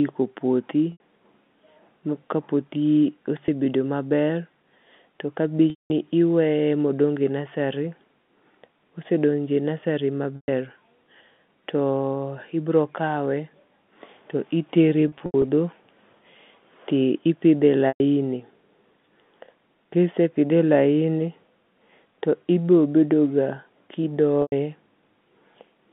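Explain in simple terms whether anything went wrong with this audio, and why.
Yes, the sound briefly sticks in seven places. This is packet loss with pitch repetition: chunks of audio went missing, and the receiver filled each gap by repeating the last bit of sound. That gives a held, buzzy note rather than a click or a plain silent gap, which is what sets it apart from an ordinary dropout. It happens at 0.92 s (80 ms), 3.46 s (20 ms), 5.7 s (200 ms, the longest, where the sound fades toward silence), 10.36 s (120 ms), 15.08 to 15.44 s just after "to itere e" (several short gaps), 17.88 s (120 ms) and 24.42 s (100 ms). The narrow telephone-line sound heard throughout is the line's normal character, not part of the fault.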